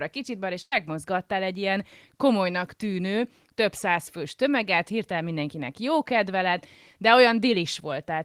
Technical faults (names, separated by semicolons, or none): burst of packet loss